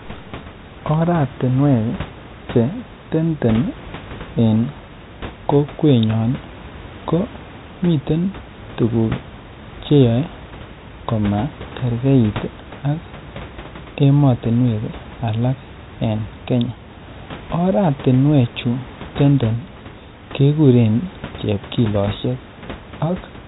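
No technical faults are audible.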